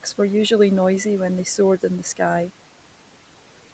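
From start to finish, a noise suppressor is pulling down the frequency bands it judges to be steady background noise, frame by frame, by about 12 dB. That produces noise suppressor artifacts: the room noise, which sits about 19 dB below the speech, drops away in the gaps between words and then comes back up underneath each phrase. The background pumps in step with the talking. Nothing is heard above 8 kHz, as expected from an Opus call path at that bandwidth.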